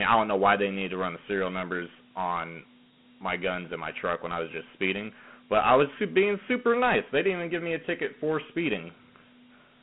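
Throughout the speech, Dialogic VOX ADPCM coding at 32 kbps coarsely quantises each sample difference into 4 bits, leaving plainly audible gritty hiss, nothing above 3.9 kHz, and a 150 Hz to 3.4 kHz line band.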